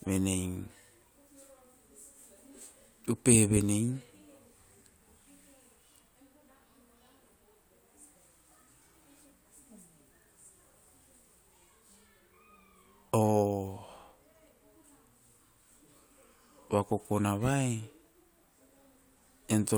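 No technical faults can be heard anywhere in the recording, so there is nothing to place in time order.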